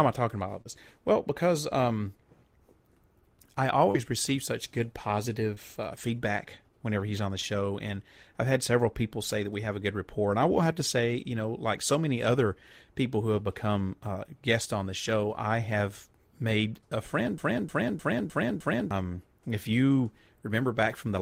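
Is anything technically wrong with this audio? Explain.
Yes. There are two kinds of fault.

Short concealed packet loss occurs four times in this speech: at 0.61 to 0.67 s, at 3.91 to 3.96 s just before "receive such good", at 5.54 to 5.58 s, and at 7.40 to 7.45 s between "whenever he's on the" and "and I've had several". Each time, 20 to 40 ms of audio failed to arrive. The receiver filled the hole by extending the preceding sound, then blended back. Each one is heard as a brief smear or wobble.

A broken-record loop runs from 17.38 to 18.91 s, after "have made a friend" and before "if you". A fragment of about 0.31 s plays five times back to back, identically. The stream or player likely stalled and kept resending the last piece it held. The speech that belonged in those 1.5 seconds is lost. It sounds like a stuttering, mechanical repetition.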